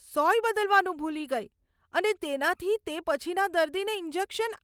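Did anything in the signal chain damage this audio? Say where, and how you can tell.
No, no damage detected.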